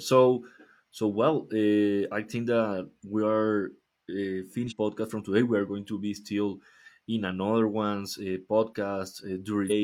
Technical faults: damaged data in a compressed stream

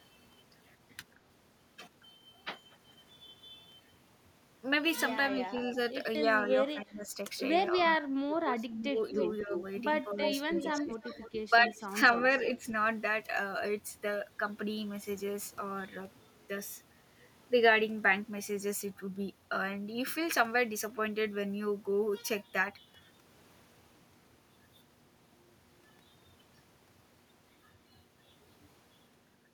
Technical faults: speech suppressed in double talk; echo leak

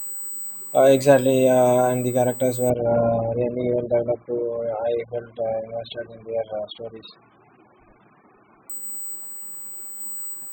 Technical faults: USB whine; adaptive stream at a lower bitrate

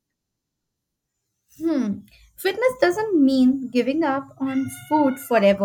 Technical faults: none

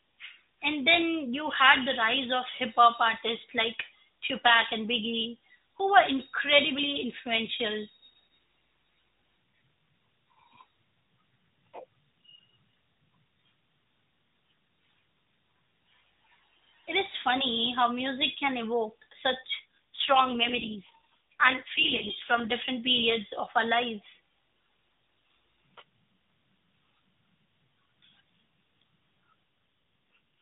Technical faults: AMR rate drop

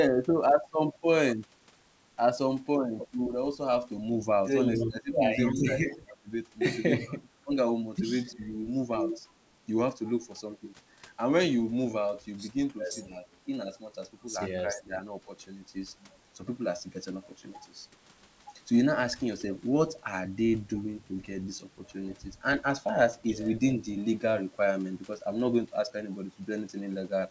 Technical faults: echo leak; speech suppressed in double talk

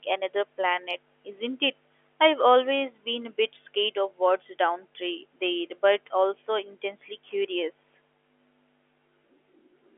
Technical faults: none

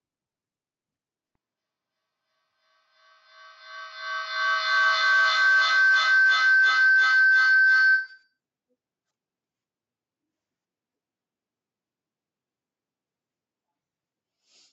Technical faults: feedback howl

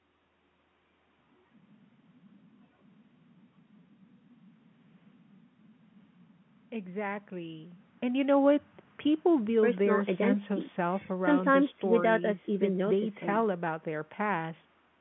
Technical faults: none

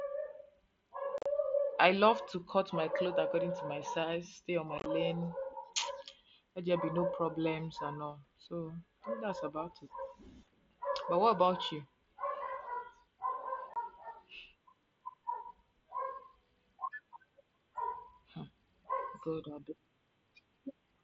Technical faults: unconcealed Bluetooth headset packet loss

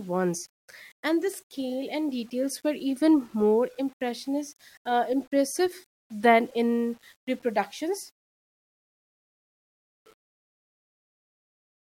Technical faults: low bit depth without dither

